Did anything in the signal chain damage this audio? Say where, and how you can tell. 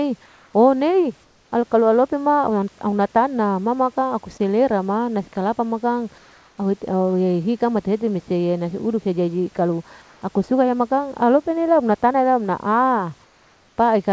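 Yes, and it happens in the call processing. There's comfort noise in place of the background at 0.26–0.54, 1.24–1.52, 6.18–6.58, 10.02–10.22 and 13.24–13.78 s. In those pauses the real room tone drops out and a smooth, featureless hiss sits in its place, about 2 to 5 dB quieter. The likely cause is discontinuous transmission: the sender goes quiet when it hears no speech, and the receiver synthesises noise to fill the gap.

There's also an onset clipped by the voice detector at 1.5 s, right where the second comfort-noise stretch ends. The speech comes in abruptly and loses roughly its first 20 ms, so the soft start is gone and the sound seems to snap on. That likely means the detector was a beat late to register that sound had resumed, so those first moments were never sent and filler noise played instead.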